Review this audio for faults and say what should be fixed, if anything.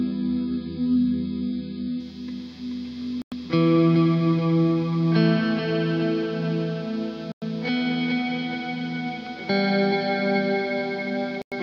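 Adaptive stream starting at a low bitrate: the player opened on a very low-bitrate rendition, so from 0.0 to 2.0 s nothing sounds above 5.1 kHz and codec artefacts are stronger, then quality jumps cleanly. Start playback on a higher rendition, or measure the connection before choosing one.

Gap between chunks: the audio was split into 4 s chunks with 100 ms silences at the joins, at 3.22, 7.32 and 11.42 s. Play chunks back to back with gapless handling that trims codec padding.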